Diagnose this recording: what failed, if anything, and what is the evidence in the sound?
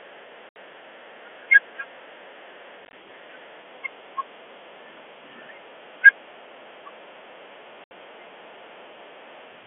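Network packet loss filled with silence: silent holes at 0.49–0.56, 2.85–2.93 (scattered) and 7.84–7.91 s. They show as flat waveform gaps and blank spectrogram columns, which fits 10 ms packets.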